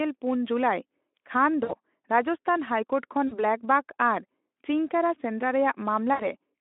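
At 1.63 to 1.74 s, 3.27 to 3.44 s and 6.13 to 6.28 s, the speech breaks with VoIP packet loss concealed by the speech codec. The decoder extends the last sound into a fading buzzy tone or coloured noise, covering about 60, 40 and 60 ms. Recovery stays weak briefly.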